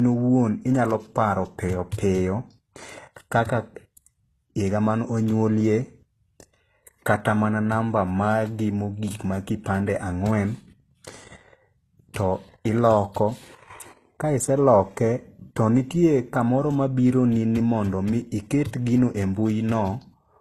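From start to finish the speech stops at 15.6 kHz and carries two layers of artefacts at once: swirly, synthetic-sounding highs with smeared detail, plus a finer graininess on top. This is likely transcoding between lossy codecs, fitting a low-bitrate HE-AAC encode re-encoded as Opus.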